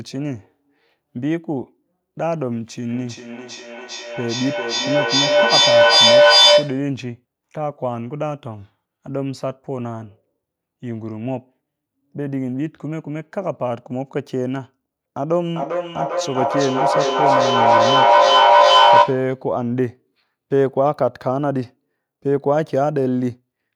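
From 2.93 to 6.95 s and again from 15.55 to 19.37 s there's feedback echo between two devices: a second device's mic re-captures the playback, so the speech loops back roughly every 0.4 s, ringing thinner each pass and building to about 9 dB above the speech.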